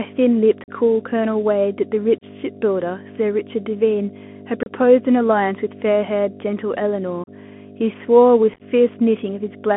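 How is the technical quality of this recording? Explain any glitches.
The quality is poor. Three faults affect this speech recording.

A loud, steady 50 Hz mains hum sits only a few decibels below the speech throughout. It comes from power-line coupling, such as a ground loop or nearby transformer.

The speech sounds narrow, granular and scratchy, with nothing above about 3.4 kHz. This is the Bluetooth CVSD headset codec at work, and the sound fits a 64 kbps one-bit link whose adaptive step lags behind the signal.

Unconcealed Bluetooth headset packet loss cuts abrupt holes into the speech at 0.64, 2.18, 4.63, 7.24 and 8.54 s, each roughly 30 to 50 ms long. At 8.54 s the holes are scattered into a chopped crackle. Each is a loss of packets replaced by silence or an idle pattern.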